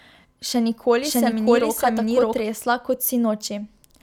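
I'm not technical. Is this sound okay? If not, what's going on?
No. From 1.02 to 2.41 s, a doubled audio track plays the speech twice, the copy about seven tenths of a second behind and equally loud. Unlike an echo, it never fades, and it starts and stops abruptly, likely from two recordings overlapping.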